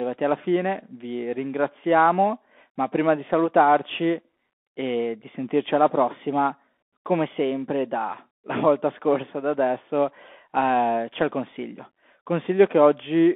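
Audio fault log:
Throughout: Bluetooth CVSD headset codec. The speech is confined to roughly 250 Hz to 3.5 kHz and carries plainly audible granular hiss and scratchy s sounds. Its one-bit step coding cannot track fast rises, which a plain telephone band filter would not cause. This fits a 64 kbps CVSD link.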